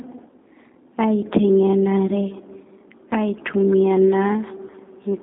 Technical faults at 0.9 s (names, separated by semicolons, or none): G.729 codec